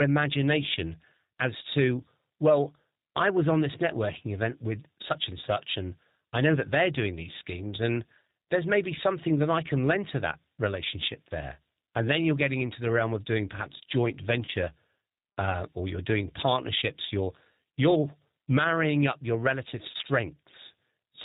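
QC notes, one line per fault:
Throughout: G.729 codec. The speech has a plainly audible rough, slightly synthetic texture and no content above 4 kHz, which fits G.729A at 8 kbit/s. The decoder rebuilds each 10 ms frame from a vocal tract filter, a pitch predictor and a few sparse pulses rather than the actual waveform, so fine detail and breathiness are replaced by a buzzy approximation, and the upper band is simply absent, leaving a narrow, telephone-like sound.
14.45 to 14.50 s and 19.91 to 19.96 s: VoIP packet loss concealed by the speech codec. At each point about 30 ms of audio went missing, consistent with one lost packet, and the decoder filled the gap by extending its last pitch and filter with falling gain. That extension is heard as a brief stretched sound, a buzzy tone or coloured noise, fading out. Because each frame is predicted from the previous one, the sound stays weakened or distorted until roughly 50 ms after each dropout begins.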